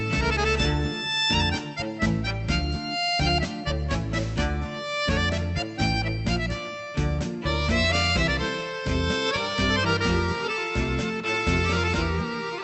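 No technical faults occur anywhere in this audio, which comes through a WebRTC call path with its bandwidth topping out around 8 kHz.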